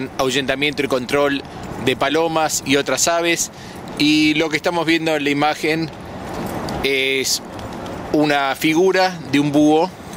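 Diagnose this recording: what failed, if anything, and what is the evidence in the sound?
Nothing failed; no faults heard.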